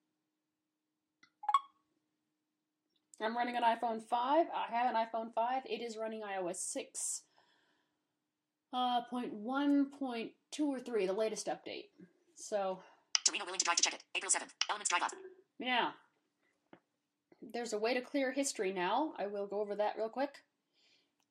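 Nothing stood out as a technical fault on listening to this audio.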